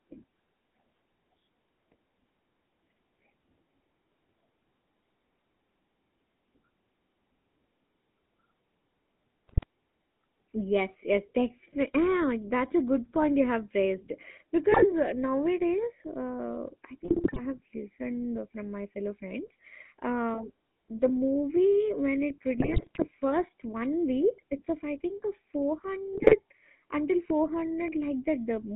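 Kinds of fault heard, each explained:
GSM full-rate codec: the whole clip went through the old GSM full-rate coder. It rebuilds the voice from a vocal-tract model fed by sparse regular pulses, so the speech has that buzzy, gravelly edge throughout. The band runs roughly 200 Hz to 3.6 kHz, so there's no air up top.
GSM bit errors: corrupted bits got into the decoder, so the filter, pitch and gain values come out wrong for short stretches. You hear squawks, pops and gargling at 9.48–9.64, 14.72–14.85, 17.05–17.60, 22.58–23.11 and 26.13–26.38 s.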